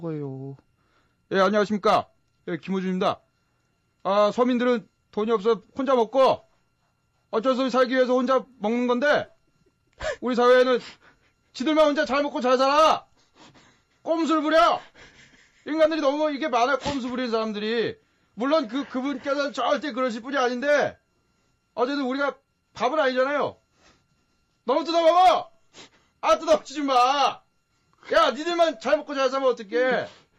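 Nothing goes wrong anywhere in the clip, and there isn't a single technical fault to point out from beginning to end.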